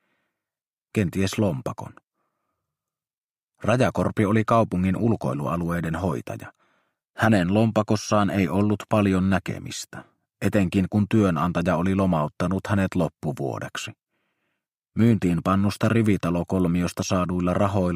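Nothing in this audio stands out as a technical fault; it just rolls along without anything going wrong that a careful listener would catch.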